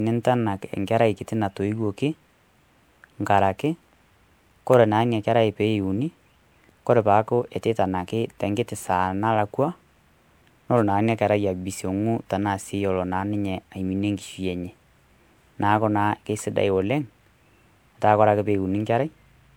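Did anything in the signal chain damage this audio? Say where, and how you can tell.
Yes, at the codec stage: generation loss throughout the speech sounds swirly, hollow and smeared, with blurred onsets. It points to MP3 near 128 kbit/s, likely re-encoded about five times on shifting frame grids; spectrograms show accumulated holes and smeared transients.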